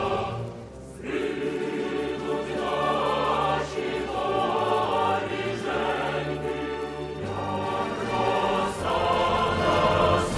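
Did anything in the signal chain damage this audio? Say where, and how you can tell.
Yes. A resampler restarted on every block damaged the audio. Each block was converted on its own, and the pattern fits a 48 kHz to 24 kHz conversion. At every block edge the filter lacked the true neighbouring samples, so each boundary carries a small error. With 10 ms blocks, those errors recur at 100 Hz and fuse into a buzz through the whole clip. The buzz rides on the signal and drops away in quiet passages.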